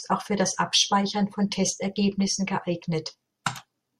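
Speech with pre-echo at 3.44 s: a short hiss about 15 dB up smears 16 ms ahead of an attack, consistent with a 26 ms transform block never switching to short blocks.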